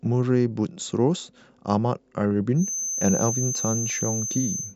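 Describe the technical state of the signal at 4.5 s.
A feedback whistle is present at 4.5 s, running from 2.53 s to the end of the clip. A thin, steady tone near 6.2 kHz sits behind the speech, a little below its level, swelling and fading slowly in loudness. The likely cause is a loudspeaker-to-microphone loop held just at the edge of feedback: that one high frequency keeps recirculating and sustaining itself without building into a runaway howl.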